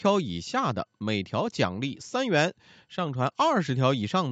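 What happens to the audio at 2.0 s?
Nothing goes wrong at 2.0 s: the speech there is intact, carried through the call path with its usual bandwidth, which reaches up to 8 kHz.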